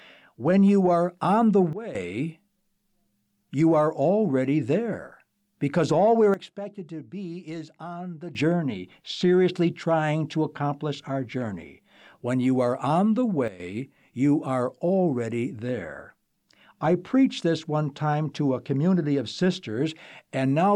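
At 1.73 s the speech and its background noise drop together by about 14 dB, recovering at 1.95 s; the same step recurs from 6.34 to 8.35 s, then about 12 dB down from 13.48 to 13.6 s. Each is a sudden gain jump, likely an unramped digital gain change.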